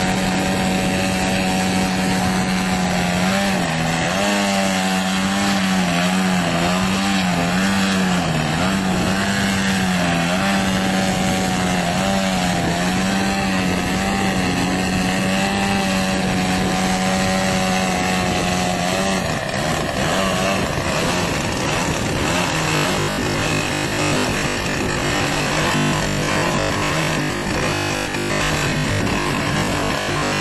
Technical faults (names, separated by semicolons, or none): robotic sound from repeated short buffers